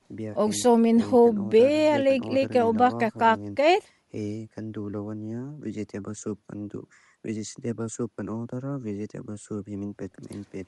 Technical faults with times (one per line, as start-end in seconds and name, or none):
0.00-10.68 Bluetooth LC3 compression